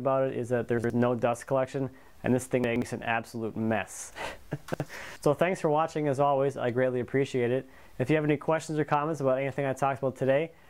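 Chunks out of order at 0.78–0.9, 2.64–2.82 and 4.74–4.86 s: 60 ms blocks play after their successors, producing brief jumbled stutters.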